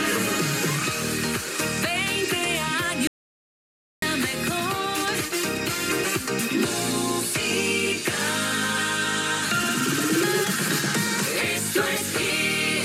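At 3.07 s the sound cuts off abruptly. This is an audio dropout to silence. The gap runs to 4.02 s, so about 0.95 s is lost. It is silence, with no room tone or hiss underneath. The sound then resumes mid-flow, as if nothing paused. The likely cause is a brief loss of the input signal while recording carried on, writing silence. Whatever happened in that stretch is gone.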